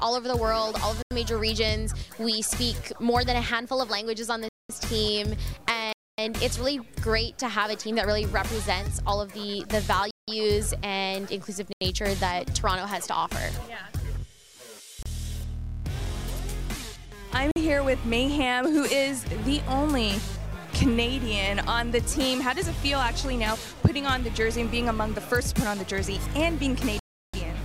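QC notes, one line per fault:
1.02–1.11 s, 4.49–4.69 s, 5.93–6.18 s, 10.11–10.28 s, 11.73–11.81 s, 15.03–15.06 s, 17.51–17.56 s, 26.99–27.34 s: block of digital silence. The sound cuts to silence and back with no fade. The 30 and 47 ms gaps come across as short holes, and the longer ones, up to 341 ms at the end, as longer holes. The 85, 171 and 341 ms gaps fit whole multiples of a 4096-sample block, which suggests output buffers that were not filled in time.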